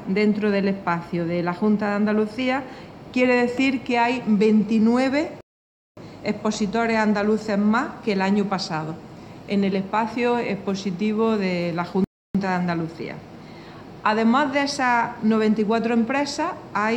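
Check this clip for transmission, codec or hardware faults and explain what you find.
There are two playback stalls here. The first runs from 5.41 to 5.97 s, about 0.56 s of dead silence. The second runs from 12.04 to 12.35 s, about 0.30 s. Each time the sound cuts out mid-flow, sits silent, then picks back up. The likely cause is the player running dry on data, or its audio thread getting blocked, so nothing reached the output until it recovered.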